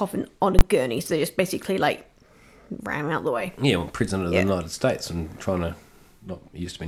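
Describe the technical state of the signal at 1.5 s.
At 1.5 s the speech signal is intact, with no audible dropout, distortion, clipping or glitch at that point.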